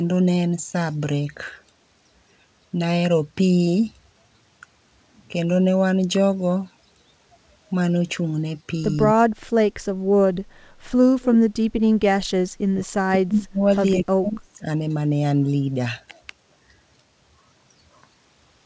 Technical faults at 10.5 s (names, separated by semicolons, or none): background gated by the echo canceller